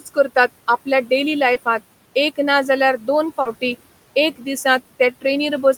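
Noise suppressor artifacts run through the whole clip. The suppressor treats the steady room noise, which sits about 20 dB below the speech, as something to remove and pulls it down by about 17 dB in the gaps. Because the gain is set band by band and frame by frame, the residual noise pumps up under the speech and drops away between phrases.

From 0.0 to 0.3 s the same processor produces speech cut by the noise suppressor. It mistakes part of the opening speech for noise and attenuates it by up to about 11 dB. About a tenth of a second of material within that span is affected, and the start sounds swallowed and faint.

Short concealed packet loss occurs twice. At 1.53 to 1.57 s, about 20 ms of audio failed to reach the decoder in time. At 3.41 to 3.47 s, about 40 ms was missing. Each time the receiver filled the gap by extending the preceding sound, using its pitch where it was voiced and shaped noise where it was not, then crossfaded back into the real signal. 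The result is a brief smear or wobble.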